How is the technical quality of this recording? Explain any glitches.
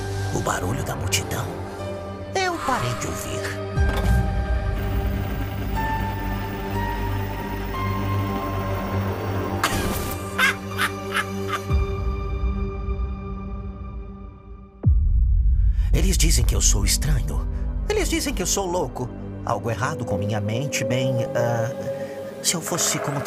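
One brief glitch is audible, at 21.26 s: a short burst of DAB burbling. A weak broadcast signal let some bit errors slip past the channel error correction into the MP2 audio stream. The error rate was low, well under one percent, but enough to corrupt audio samples, so short blips of noise appeared in single sub-bands. The result is a quick burst of burbling laid over the programme, gone almost as soon as it starts.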